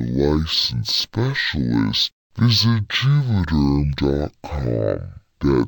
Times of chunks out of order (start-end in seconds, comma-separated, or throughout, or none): none